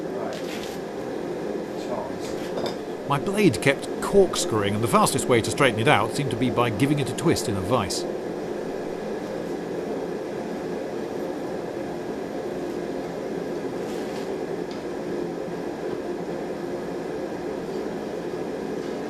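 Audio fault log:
No faults to log; the signal holds steady from first sample to last with no events to report.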